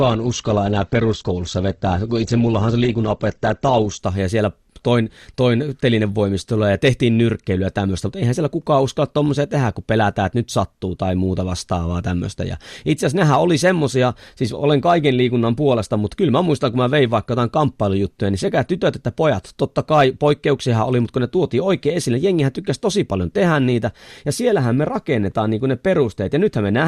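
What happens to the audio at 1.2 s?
At 1.2 s the speech sounds dull and smeared, with nothing above about 8.2 kHz and noticeable codec artefacts. This is an adaptive stream starting at a low bitrate: the player began on a low-quality version so playback could start at once, and the sound points to something like Opus at 12 kbit/s. At 4.0 s it switches to a better version, which fits about 64 kbit/s, and the treble returns suddenly with no gap.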